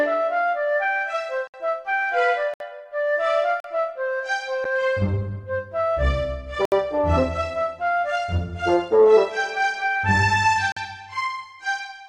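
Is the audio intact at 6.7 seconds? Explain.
No. From 6.65 to 6.72 s there is a gap between stream segments: two pieces of the stream don't quite meet in time, so the player inserts about 68 ms of hard-edged silence. Unlike a dropout, nothing is lost; the sound resumes exactly where it stopped, only later.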